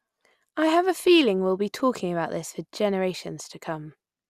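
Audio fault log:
1.74–1.80 s, DAB burbling: a short burst of burbling over the speech. Bit errors slipped past error correction and corrupted sub-band samples, putting short blips of noise in single bands. This points to weak reception.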